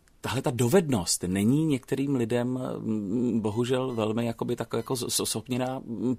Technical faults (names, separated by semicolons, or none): computer activity noise